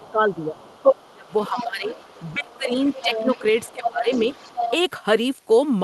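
A speech recording with speech suppressed in double talk at 0.0–0.58, 0.98–1.93 and 2.34–4.06 s, where the talker dips by up to roughly 25 dB, likely from an echo canceller ducking both sides. Unlike a dropout, the level sinks only while another voice overlaps. That other side's voice is leaking through from 0.07 to 4.71 s, around 10 dB below the talker. It is a second voice, not a delayed copy of the talker's own speech.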